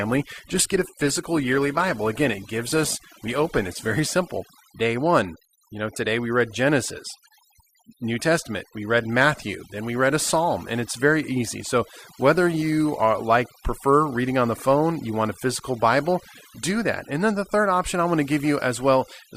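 Adaptive stream starting at a low bitrate, from 0.0 to 4.0 s of this speech clip: the player opened on a lean version of the stream so playback could begin quickly, then switched up once it had gauged the connection. For those first four seconds the treble is dulled or synthetic and codec smearing is pronounced, which fits an Opus stream around 16 kbit/s. At 4.0 s quality jumps abruptly with no gap, consistent with a step to roughly 64 kbit/s, and the top end then reaches to about 20.2 kHz. Overdone noise removal runs through the whole recording: a denoiser set far too aggressively cuts individual frequency bands whenever they sit close to its noise estimate, taking the quieter components of the voice with them. The background collapses into near silence scattered with twinkling, chirpy specks.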